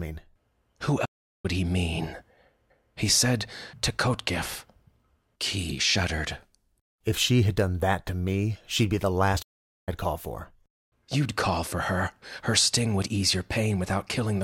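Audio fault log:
1.05–1.45 s and 9.42–9.89 s, playback stall: the speech just drops out for about 0.39 s and then 0.45 s, then picks up again. The player most likely ran dry of data or had its thread blocked, leaving the output silent until it recovered.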